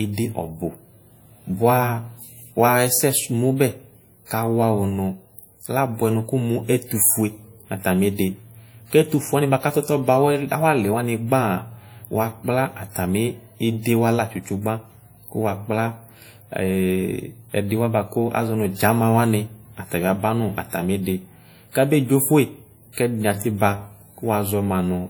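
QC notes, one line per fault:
Throughout: WMA compression. The speech was most likely passed through a Windows Media Audio encoder at a low rate, one that fits about 48 kbps. Its long transform blocks smear quantisation noise over tens of milliseconds and drop the weakest spectral lines, so the damage is plainly audible: syllables ring and turn washy, and a hiss rises and falls with the speech. Content still reaches about 20.1 kHz, so the top end is not cut off.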